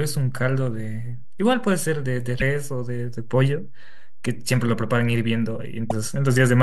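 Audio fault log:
Throughout: DC offset. The whole speech waveform sits off the zero line by a constant amount. It cannot be heard as a sound and appears as steady energy at 0 Hz. A low hum or rumble would move, but this shift stays fixed.
2.39–2.42 s and 5.89–5.92 s: broken MP3 bit reservoir. Each event is a brief skip in the speech, about one 26.1 ms frame long, and the audio jumps ahead. The likely cause is removed frames leaving the next frame to decode borrowed bytes that belong to another frame. This differs from a clean dropout or a single click.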